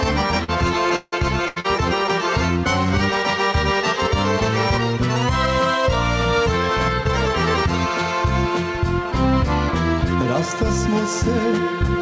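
At 0.44 s comes a short concealed packet loss. About 40 ms of audio never reached the decoder in time. The receiver carried the last sound across the hole and blended back, so it is heard as a brief smear.

From 0.96 to 1.15 s the sound stretches into a fading buzz or hiss for about 160 ms. Then about 40 ms of silence follows before it returns. That missing stretch never plays. The likely cause is a long network dropout.

From 1.48 to 1.59 s there is a burst of packet loss. Roughly 80 ms in a row went missing. The last sound is held and turned down as the gap runs on. It then resumes further on, with the middle gone.

A second short concealed packet loss follows at 1.60 s, just after the burst. Another 40 ms is filled in the same way, giving a quick wobble. All of this rides on a call path with nothing above 8 kHz, which fits G.722 at 64 kbps.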